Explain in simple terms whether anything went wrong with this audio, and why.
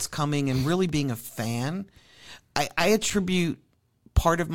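Something did go wrong: the speech has two tiny blocks of digital silence. At about 0.89 s, between "coming and really" and "being a fan", the sound vanishes for 2.7 ms, and at about 3.10 s, just after "I I", it vanishes for 5.3 ms. The sound is switched off and back on with no fade, so each gap is heard as a tick or dip rather than as silence. The lengths fit blocks of 128 and 256 samples, which suggests the playback program didn't fill its output buffer in time.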